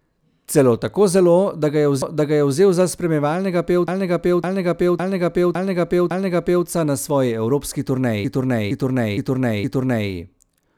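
Speech, with repeated frames in three places. Just after "zelo da ga je" a 0.56 s chunk plays twice (2.02–2.58 s). After "za spremljevalnega" the same-length chunk loops five extra times (3.88–6.67 s). A 0.46 s chunk then repeats four more times (8.25–10.10 s). Each time, a stretch of the compressed stream got delivered again and the decoder simply replayed it, so you hear a stutter, and the clip runs longer.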